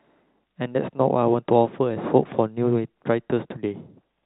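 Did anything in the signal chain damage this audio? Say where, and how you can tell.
No, nothing damaged this audio.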